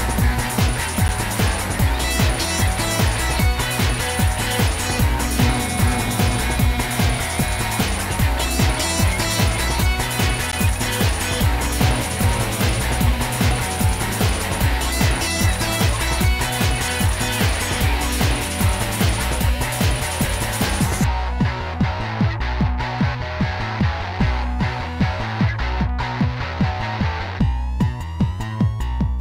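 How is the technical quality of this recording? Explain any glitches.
Two brief dropouts mark the recording, both of the same kind. At 1.08 s and again at 10.52 s there is a block of digital silence, lasting 10 ms and 14 ms respectively, where samples were replaced by zeros, likely because the output buffer was not filled in time. The abrupt cut to silence and back is heard as a short tick.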